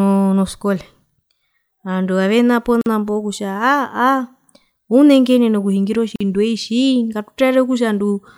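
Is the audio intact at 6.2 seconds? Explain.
No. From 6.16 to 6.21 s the speech drops into a gap of about 46 ms, with smeared edges, then resumes where it stopped. This is a gap at a join of encoded pieces: separately encoded segments were joined untrimmed, leaving encoder delay and end padding.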